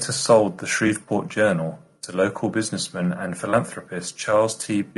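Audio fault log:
throughout: low-delay AAC compression. The speech sounds rough and grainy, with a hiss-like fill between the pitch harmonics and a top band that sounds thin and synthetic. This points to a low-delay AAC-ELD encoder, likely, and a bitrate near 32 kbps. Its short frames give too little frequency detail to separate the harmonics cleanly, so the bits spread thinly. Ordinary AAC at this rate would sound smoother and less grainy. The low-delay codec instead leaves noise between the harmonics.
0.87–0.91 s: AAC frame loss with concealment. Just after "sold the", a 20 ms stretch turns briefly smeared and phasey. One frame is missing, and the decoder rebuilds it from the last good spectrum, so the sound becomes blurred noise rather than falling silent. That smeared patch separates it from a dropout or a click. The gap is short enough that the concealment never fades to silence, and the sound carries straight on afterwards.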